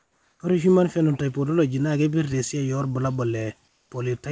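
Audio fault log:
0.00–0.40 s and 3.68–3.90 s, comfort noise in place of the background. The real room sound drops out and a smooth, featureless hiss fills these pauses, about 4 dB and then about 3 dB quieter. The likely cause is discontinuous transmission, with the receiver synthesising noise while the sender stays silent. The clip, band-limited at 8 kHz as from a G.722 call, carries this low background about 45 dB below its loudest parts.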